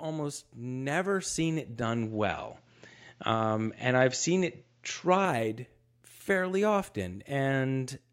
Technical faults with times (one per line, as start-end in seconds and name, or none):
1.82-5.25 input switched to a poorer device